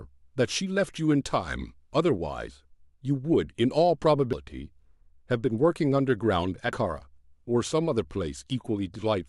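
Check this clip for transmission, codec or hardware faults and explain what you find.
There's one recurring fault here. At 1.93, 4.33 and 6.73 s the speech skips, losing roughly a tenth of a second each time, most likely audio missing between chunks as the recorder changes over about every 2.5 s.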